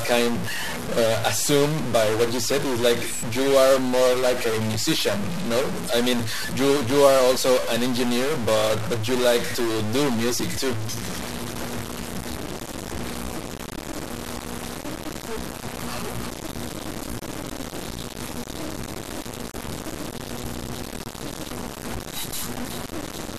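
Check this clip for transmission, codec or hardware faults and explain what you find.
A stuck bit runs through the whole speech clip, from start to end. The speech has a harsh, buzzy distortion throughout, and the pauses are filled with noise rather than falling silent. The likely cause is one data bit held at a fixed value by a broken line or converter. Roughly half the samples are then offset by that bit's weight, a step of around -25 dBFS, in a pattern that follows the waveform. On a waveform view, quiet stretches show a blocky, stepped offset instead of a flat line. A spectrogram shows broadband hash through the gaps between speech.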